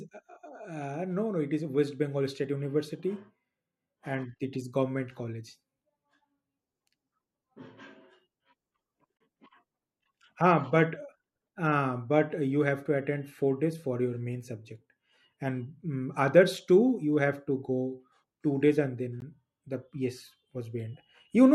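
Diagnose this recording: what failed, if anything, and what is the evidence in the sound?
The fault sits at the codec stage. It is a gap at a join of encoded pieces. The speech breaks off from 9.17 to 9.20 s, a gap of 32 ms, and again at 19.20 s for 16 ms. The dropouts recur every 10 s, which points to pieces about 10 s long. Each piece was encoded on its own and joined untrimmed. The encoder's start delay and final-frame padding stay in as silence. The edges are smeared, and the speech resumes where it stopped.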